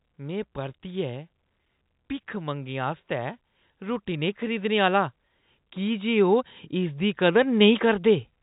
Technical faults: automatic gain rising

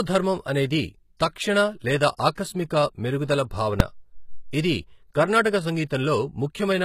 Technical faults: HE-AAC compression; pre-echo; invalid numbers at full scale

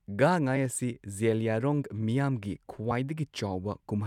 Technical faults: damaged data in a compressed stream

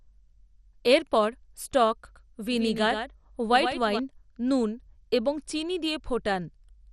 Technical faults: MP2 compression; doubled audio track

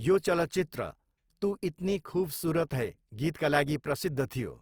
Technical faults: Opus compression

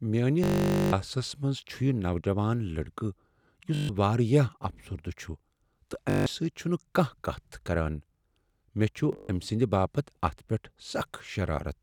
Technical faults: Bluetooth stutter

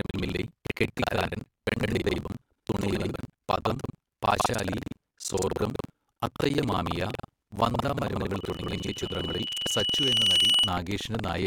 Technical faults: buffer tearing; loudspeaker feedback squeal

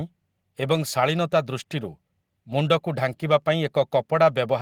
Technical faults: none

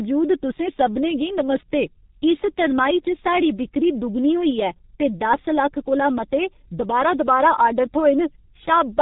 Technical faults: G.723.1 codec

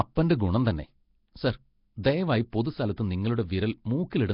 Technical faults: Nellymoser compression

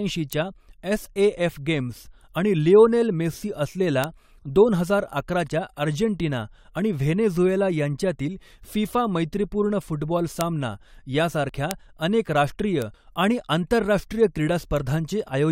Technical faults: bit error spike; overlap between stream segments

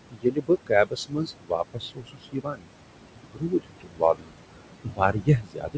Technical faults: noise suppressor artifacts; speech cut by the noise suppressor

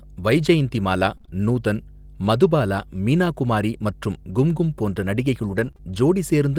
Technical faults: mains hum; scattered short gaps; lost packet rebuilt from error correction; short concealed packet loss

